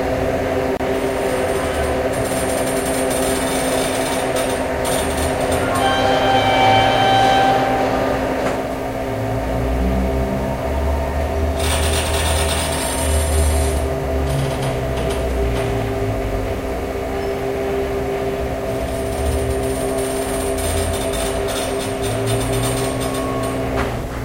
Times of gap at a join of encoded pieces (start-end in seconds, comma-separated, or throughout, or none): 0.77-0.80